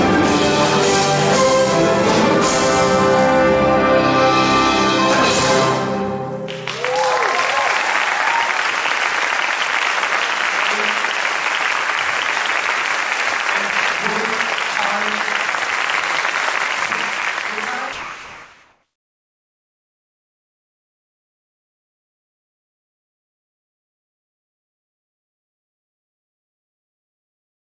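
Audio that has passed through a call path, with nothing above 8 kHz, which fits a wideband codec such as G.722. From 17.93 s to the end at 27.76 s, roughly 9.8 s, the background sits about 67 dB below the loudest material and is replaced by smoother comfort noise at an unchanged level. The likely cause is discontinuous transmission, where the sender stops sending during silence and the receiver fills the gap with synthetic noise.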